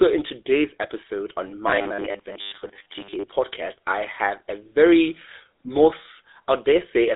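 Throughout, the speech carries plainly audible GSM full-rate codec damage. The voice is rebuilt from a vocal-tract model driven by sparse pulses. The band runs from about 250 Hz to 3.7 kHz, with nothing above 3.8 kHz. It sounds buzzy and gravelly, consistent with a 13 kbps phone codec.

From 1.67 to 3.24 s, the speech turns into a rigid, metallic buzz. This is robotic sound from repeated short buffers. New audio likely arrives too seldom, so about 10 ms is replayed over most of the stretch. The loop imposes a fixed 100 Hz buzz.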